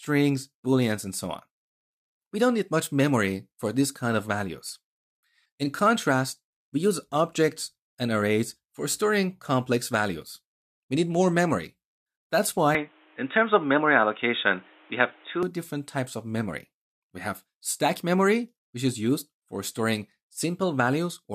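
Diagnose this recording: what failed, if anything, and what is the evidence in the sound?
Input switched to a poorer device, 12.75 to 15.43 s: the sound abruptly turns dull, with nothing above 3.8 kHz. It shifts level by around 5 dB and gains a noise floor some 35 dB down, without a gap. The driver stage likely rerouted capture to a narrower-band microphone.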